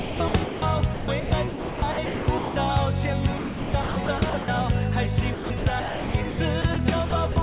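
Five choppy stretches run through the clip: 0.00–0.62 s, 0.94–2.56 s, 3.38–4.48 s, 5.34–6.76 s and 7.10–7.36 s. It's sound chopped by the voice detector, likely the sender's detector repeatedly gating off quiet parts and filling them with comfort noise, from about 1.06 s of the second stretch down to 60 ms in the last. You hear holes filled with synthetic noise, all band-limited to 4 kHz, which fits a G.711 call path.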